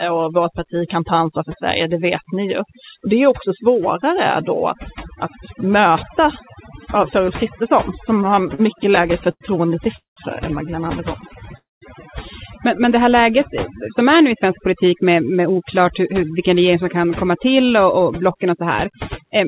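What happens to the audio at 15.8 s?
At 15.8 s the sound is inside a jitter buffer speed-up running from about 14.32 to 19.38 s. The receiver had built up too much audio and trimmed short pitch-period pieces, dropping roughly a third of a second in total. Speech runs about 6% faster at unchanged pitch and feels slightly hurried.

Overdone noise removal also affects this moment, as it does the whole clip. Frequency bands near the estimated noise floor are pushed down hard, taking quiet speech detail with them. The background drops and breaks up into twinkling specks.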